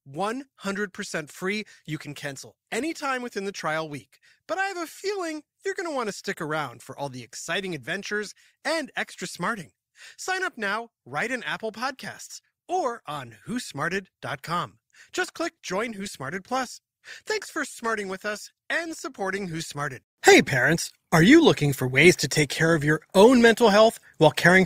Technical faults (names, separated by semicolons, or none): adaptive stream at a lower bitrate